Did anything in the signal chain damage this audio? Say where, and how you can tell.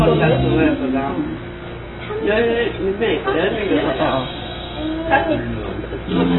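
Yes, at the codec stage, all the way through. Nothing survives above 4 kHz, and what's left sounds dull, smeared and warbly. That's AAC compression, likely AAC-LC at a starved bitrate around 16 kbps, lowering its cut-off and quantising the remaining bands coarsely.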